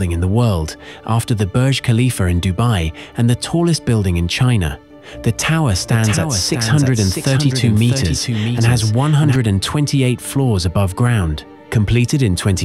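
From 5.40 s to 9.36 s the audio carries a doubled audio track. A second, full-band copy of the same sound trails the original by about 0.7 s, roughly 5 dB quieter. It has no decay and no room colour, so it reads as a distinct repeat rather than an echo. The copy cuts in and out abruptly at both ends. The likely cause is the signal being captured twice, once through a slower path.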